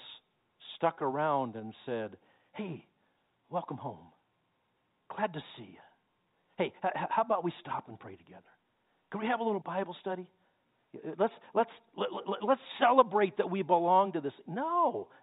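There are no technical faults to describe in time order anywhere in this speech, which carries the narrow band of G.711 telephone coding throughout.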